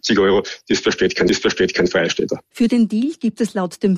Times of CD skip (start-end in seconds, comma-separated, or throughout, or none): 1.29